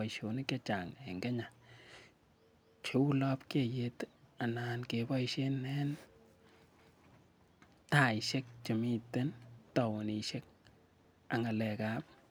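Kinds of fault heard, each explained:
Overlapping chunks: the speech was handled in pieces of about 4 s, and each new piece starts a quarter of a second before the previous one finished, so 250 ms gets played twice at every join. You hear it as a little stutter, a short stretch jumping back and repeating, at 2.55–2.80 s, 6.80–7.05 s and 11.05–11.30 s, the last one just before "ak ng'alek".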